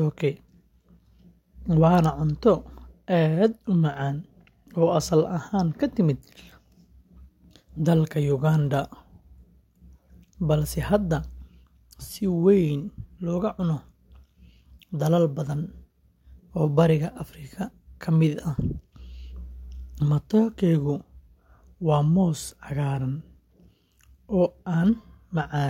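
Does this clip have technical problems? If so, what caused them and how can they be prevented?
No, no technical faults.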